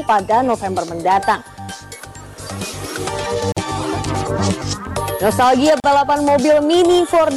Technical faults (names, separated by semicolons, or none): gap at a join of encoded pieces